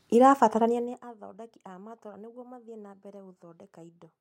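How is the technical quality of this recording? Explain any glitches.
The recording has one glitch. From 0.66 to 1.05 s, zipper noise: the level drops about 20 dB in 1 dB steps, around a hundred a second, each a click, giving a ticking buzz and a staircase waveform with vertical spectrogram lines.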